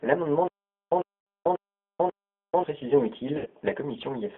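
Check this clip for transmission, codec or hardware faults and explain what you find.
Three faults are present: G.729 coding throughout, a stuttering stall, and two concealed packet losses.

G.729 codec, throughout: a low-rate speech coder, consistent with 8 kbit/s G.729, rebuilds the speech from a model, leaving a 250 Hz to 3.6 kHz band and a rough, synthetic edge.

Stutter with silent gaps, 0.48 to 2.64 s: the stream likely stalled and replayed its last fragment, so a 100 ms burst repeats four times, every 540 ms, with about 440 ms of silence between.

VoIP packet loss concealed by the speech codec, 1.21 to 1.27 s (60 ms) and 3.37 to 3.47 s (80 ms): the decoder extrapolated over missing packets, which fits three and four lost, so speech smears into a fading buzz or coloured noise.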